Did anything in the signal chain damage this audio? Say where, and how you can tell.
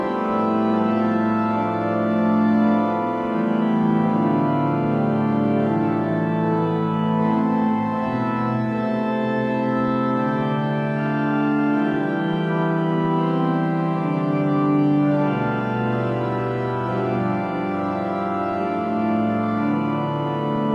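No, nothing in the signal chain audibly damaged this audio. None of the stages from capture to playback has left any trace that can be heard in these sounds.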